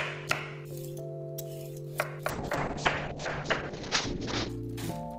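From 2.3 to 4.55 s there's a call bitrate drop: the encoder starves, highs cut off near 8 kHz, and the sound turns muffled and watery, which fits roughly 6 kbps.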